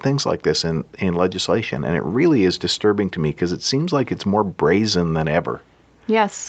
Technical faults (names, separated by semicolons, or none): none